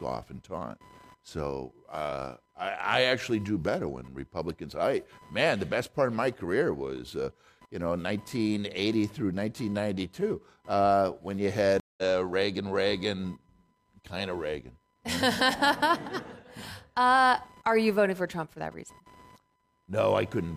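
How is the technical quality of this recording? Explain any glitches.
The recording has two technical problems: a constant interference noise from the computer and one dropout partway through.

Computer activity noise runs through the whole clip: a chirping buzz pulsing at around 1 kHz, roughly 30 dB below the speech. Processor and graphics load shifts the shared audio ground. Unlike mains hum, it follows the machine's workload, not the speech.

A stream reconnect occurs from 11.80 to 12.03 s, just after "uh when you". The connection dropped, leaving about 0.18 s of silence. A fresh decoder then picked up the stream roughly 150 ms later. Unlike a plain dropout, the speech skips ahead instead of resuming where it stopped.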